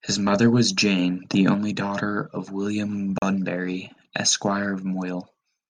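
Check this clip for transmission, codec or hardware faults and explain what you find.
Two faults turn up in this speech clip.

From 0.99 to 1.55 s, right after "mother was", there's a sudden gain jump: the level steps up about 4 dB at once, background noise included, and stays there until just before "daughter of". That's likely a gain setting applied without any ramp.

Around 3.18 to 3.22 s there's a Bluetooth stall, a 37 ms drop to silence before the sound carries on. It's likely interference delaying packets so the headphone buffer ran empty until the resends arrived.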